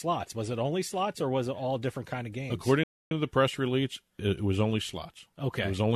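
A rebuffering stall runs from 2.84 to 3.11 s: the player exhausted its downloaded audio and halted until more data arrived. The speech drops to silence for about 0.28 s, then resumes exactly where it paused with "to the press release", losing nothing but adding time.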